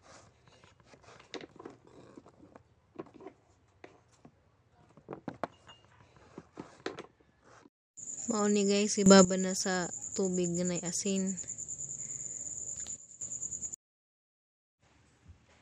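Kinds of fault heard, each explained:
Sudden gain jump: at 9.06 s the sound and its background noise leap up together by about 12 dB, then at 12.97 s both drop back down by about 12 dB, with no fade; likely a digital gain setting applied instantly, without a ramp.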